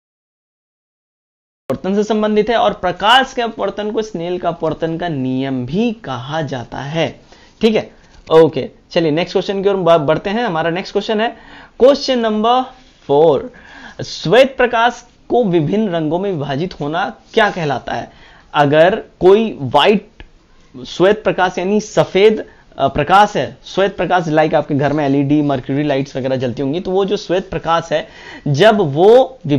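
From 0.00 to 1.70 s there is only digital silence, and at 1.70 s the audio starts abruptly partway through a sound: a cut-off start. Capture began late, so the sound's natural attack was never recorded and it arrives with no onset or fade-in.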